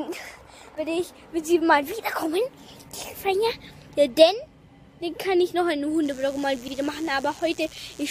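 From 6.01 s to the end of the clip, a mains buzz sits under the audio at roughly 25 dB below the signal. It is a steady, raspy tone built on 60 Hz, with harmonics climbing well into the kilohertz range. That edge comes from sharp switching spikes, two per 60 Hz cycle, which a dimmer, a rectifier or a poorly shielded cable can inject into the signal path. A stretch of repeated frames also falls inside the buzzing section, between 6.67 and 6.71 s. A 46.4 ms block plays a second time straight after itself, which fits two compressed frames being written or sent twice. The result is a short stutter. The duplicate adds 46.4 ms to the running time, so everything after it arrives slightly late.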